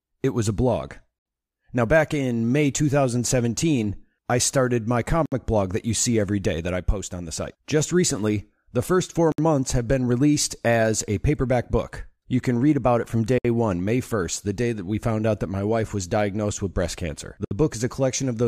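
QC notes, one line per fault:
1.19–1.26, 5.26–5.32, 9.32–9.38, 13.38–13.45, 17.45–17.51 s: gap at a join of encoded pieces. Silences of about 64–69 ms recur about every 4.0 s where separately encoded pieces meet untrimmed. Unlike a dropout, the speech resumes where it stopped, and the edges are codec-smeared.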